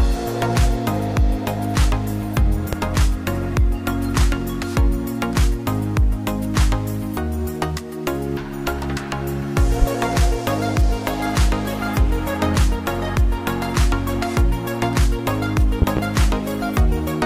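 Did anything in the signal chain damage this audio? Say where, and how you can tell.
Yes: loud pops at 2.73–2.76 s, 9.82–9.85 s and a double at 15.82–16.00 s, about 15 dB above the sound. These are likely voltage pulses in the analogue wiring. They show as sharp waveform spikes and full-band spectrogram stripes.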